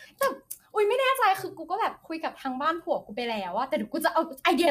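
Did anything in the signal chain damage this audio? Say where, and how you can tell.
Yes, at the codec stage, and it runs the whole clip. The speech sounds rough and grainy, with noise filling the gaps between harmonics and a thin, synthetic top end. That's likely low-delay AAC compression (AAC-ELD), whose short frames smear pitch detail at a bitrate around 32 kbps.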